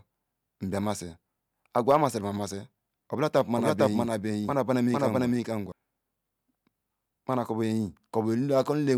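From 3.56 to 5.72 s, a doubled audio track appears. An equally loud copy trails about half a second behind, likely from a second, slower capture path.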